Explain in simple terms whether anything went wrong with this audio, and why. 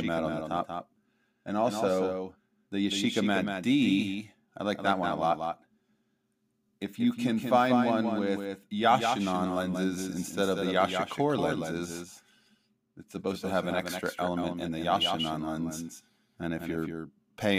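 The speech has a doubled audio track throughout: a quieter second copy trails about a fifth of a second behind, likely from a slower second capture path.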